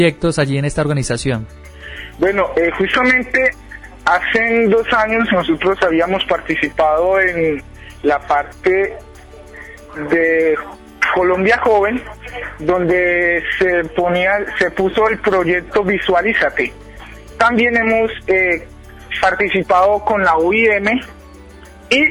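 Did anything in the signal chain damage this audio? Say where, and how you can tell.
No, nothing along the signal chain has left an audible mark on this audio. No stage from capture through to playback shows any sign of damage.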